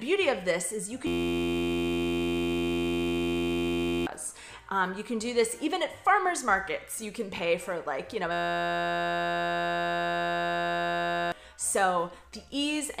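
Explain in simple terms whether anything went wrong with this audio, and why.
Two stretches of the audio break down, from 1.07 to 4.06 s and again from 8.32 to 11.32 s. Both are a system hang loop: the computer stalled while the sound hardware kept replaying the same tiny slice of audio, about 11.6 ms long, which fits a 512-sample buffer. Because that slice repeats 86 times a second, it comes out as a steady buzz instead of a stutter, and about three seconds of real audio is lost each time.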